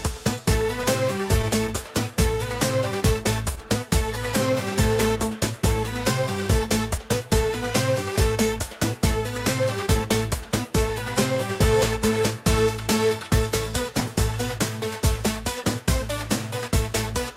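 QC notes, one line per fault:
0.83 s and 15.6 s, dropped buffer (overrun): likely the capture side fell behind and the hardware overwrote unread samples, so roughly 30 ms and then about 10 ms of audio vanish. The remaining edges butt together with no gap, giving a small forward jump each time.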